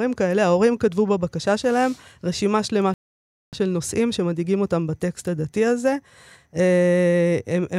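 A playback stall interrupts this speech clip at 2.94 s: the output drops to silence in mid-flow and stays dead until 3.53 s, a gap of about 0.59 s, before the speech picks up again. The likely cause is the player running short of data or having its thread blocked. What separates it from a brief dropout or a packet-loss gap is the length of the hole and the clean, total silence rather than a click or smeared fill.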